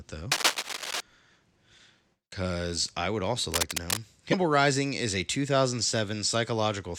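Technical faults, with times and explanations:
0.32–1.01 s and 3.52–4.00 s, cable scratch noise: two stretches of dense, ragged scratching over the speech. The first sits at roughly the same level as the talker, and the second, starting just after "because I would also", is a bit quieter, around 5 dB under. This is likely a worn cable or connector being moved, with its contact resistance jittering fast enough to spray uneven bursts of noise into the signal.
4.31–4.34 s, broken MP3 bit reservoir: a brief glitch of about 28 ms where the audio lurches forward. The likely cause is missing MP3 frames. The next frame reaches back into the bit reservoir for data it borrowed, finds bytes from some other frame, and decodes garbage. The length fits roughly one 24 ms frame going bad.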